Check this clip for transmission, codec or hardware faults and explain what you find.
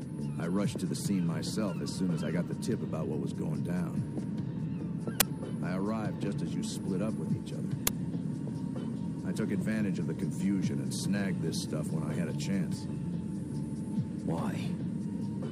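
Two uninitialised buffer bursts, at 5.20 s and 7.87 s: 10 ms and 5 ms blocks played unfilled, so leftover memory becomes a loud crack.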